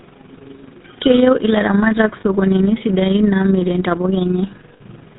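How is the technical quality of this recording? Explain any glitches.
The recording is technically poor, carrying codec damage throughout and two brief dropouts. Throughout, the GSM full-rate codec rebuilds the voice from a vocal-tract model and sparse pulses, with a rate that points to 13 kbps, giving buzzy, gravelly speech with nothing above 4 kHz. At 2.2 to 2.24 s (40 ms) and 4.74 to 4.82 s (60 ms), lost GSM frames were bridged by repeating the last good frame, which fits two and three lost frames, leaving a short rough, metallic ring.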